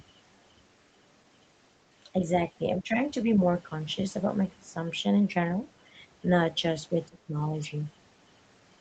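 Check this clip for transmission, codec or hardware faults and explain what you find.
There's one kind of fault, speech suppressed in double talk, and it shows up twice in this speech. The audio also tops out around 8 kHz, which fits a wideband Opus call at a fairly low bitrate.

From 2.76 to 2.99 s the level sags by roughly 10 dB for about a fifth of a second. From 7.07 to 7.36 s it drops harder, around 20 dB, for a similar stretch. The likely cause is the far end talking at the same time. The echo canceller couldn't tell this talker from its own loudspeaker echo, so it ducked everything and the speech briefly dips.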